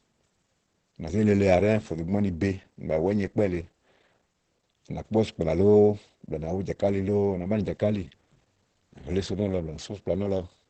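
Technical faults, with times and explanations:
Throughout: Opus compression, and pretty audible. Nothing comes through above about 8.3 kHz, so the speech is muffled and a bit hoarse. That's the sound of the encoder's wideband SILK speech mode, likely running at a low rate around 16 kbps.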